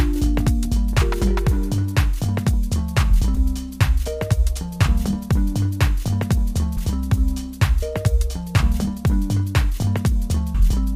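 At 7.82 s and again at 10.54 s, compressed frames are skipped. Whole coded frames never reach the output, so the audio lurches forward. The first jump loses roughly 70 ms, the second roughly 100 ms, which fits two and three 32 ms frames.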